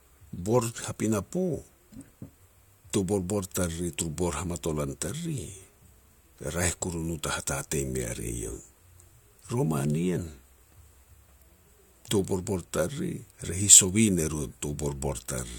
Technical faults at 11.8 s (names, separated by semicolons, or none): none